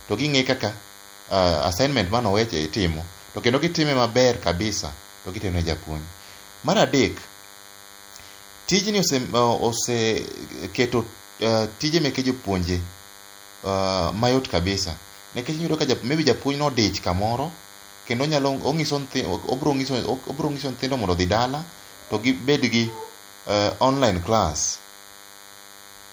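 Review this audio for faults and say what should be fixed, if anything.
A DECT cordless phone buzz runs through the whole speech clip: a thin, steady buzz at 100 Hz, around 25 dB below the speech, from a nearby handset or base whose 10 ms radio bursts are rectified in the audio circuitry. A spectrogram shows evenly spaced horizontal lines at 100 Hz and its multiples, and the waveform carries a regular 10 ms ripple. Keep DECT handsets and bases well away from microphones, preamps and cables.

Plainly audible watery, swirly coding damage is present throughout, with smeared consonant onsets, and is likely from MP3 compression at a rate that fits about 64 kbps. With too few bits, weak frequency lines are dropped and return from frame to frame. On a spectrogram, patchy holes flicker in and out, and nothing appears above 21 kHz. Record and edit in a lossless format, and use a higher bitrate for any final MP3.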